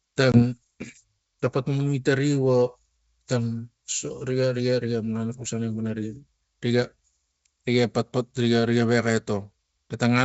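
Speech carried over G.722 wideband coding shows packet loss on an ADPCM call from 0.32 to 0.43 s. A hard-edged 20 ms silent gap, consistent with a single lost packet, is followed by slightly distorted speech while the decoder's adaptive predictor and step size drift back into step with the sender's.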